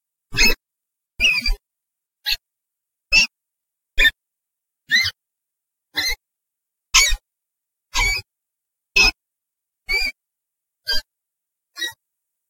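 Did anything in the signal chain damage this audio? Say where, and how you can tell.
Yes. Clock slip clicks run from 0.10 s to 12.49 s, a soft rattle of single-sample ticks roughly every 20 ms. The likely cause is two converters on unsynchronised clocks, around 1000 ppm apart, so a sample is dropped or repeated each time the drift reaches a whole sample.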